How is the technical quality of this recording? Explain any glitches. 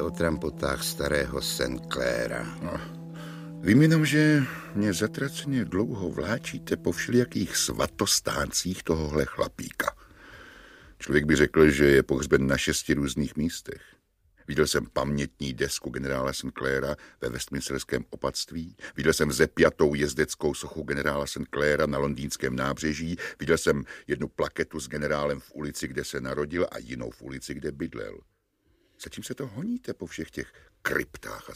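There is one glitch: a bit error spike at 7.22 s, three samples long and peaking at about -26 dBFS. A flipped bit made the values jump by a power of two and return, giving one brief broadband tick. Unlike a dropout click, no audio goes missing around it.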